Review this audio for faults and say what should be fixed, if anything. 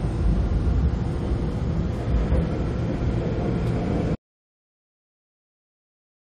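An audio dropout to silence starts at 4.15 s and runs to the end at 6.27 s. The sound cuts off mid-flow into silence, with no room tone. The input was likely lost while recording continued. Re-record that section, and secure cables, links and mute controls beforehand.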